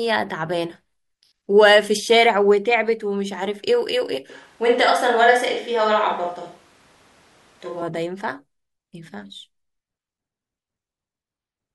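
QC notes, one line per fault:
4.30–7.82 s, switch to a distant microphone: speech abruptly turns roomy, hollow and bass-light at similar level, with room noise about 35 dB down, likely a farther microphone substituting.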